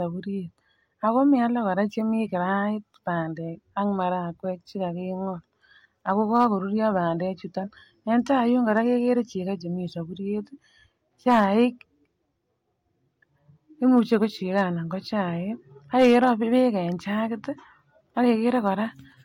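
Hard clipping flattens speech peaks at 6.36–6.45, 8.71–8.78, 11.28–11.45, 13.97–14.14, 14.58–14.61 and 16.00–16.31 s. The signal overdrives the stage by about 1 to 4 dB, and the squared-off tops add high harmonics. The result is brief crackle, harshest at 11.3 and 16.0 s.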